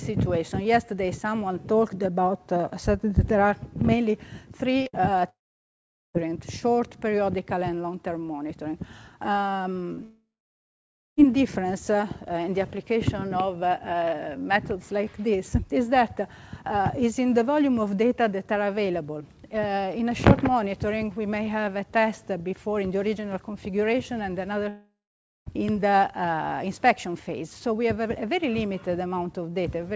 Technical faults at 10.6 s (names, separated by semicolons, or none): long network dropout